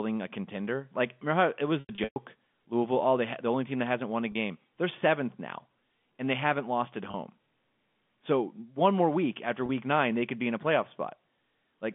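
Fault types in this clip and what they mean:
Packet loss with pitch repetition: at 1.8–2.16, 4.32, 7.11 and 9.66 s, gaps are filled by repeating the last pitch period, sounding held and buzzy.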